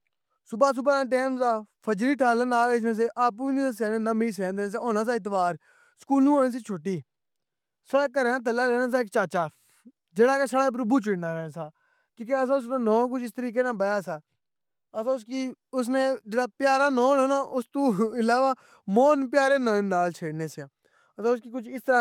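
Speech recording, no technical faults audible anywhere in it.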